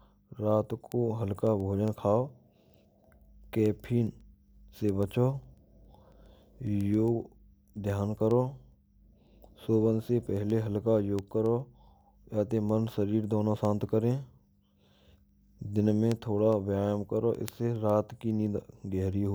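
Speech carrying word clock ticks from 0.24 to 19.27 s, roughly every 0.15 s: an unlocked digital receiver slipping single samples, whose steady rate distinguishes them from random crackle.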